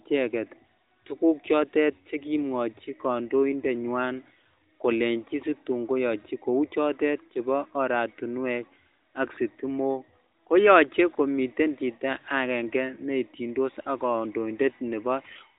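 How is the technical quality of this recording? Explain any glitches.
There are no glitches to explain in this speech recording. It has the narrowband sound of the AMR mobile speech codec, with nothing above 4 kHz, and only light coding damage, which fits its highest-quality 12.2 kbps mode.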